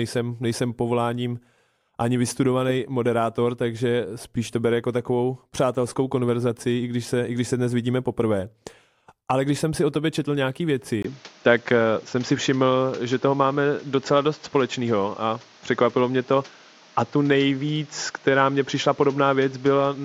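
At 11.03 s the sound breaks for about 20 ms, then continues duller and narrower, with nothing above 7.3 kHz, a level shift of around 5 dB and a new background noise, all lasting to the end. The input likely switched to a poorer device.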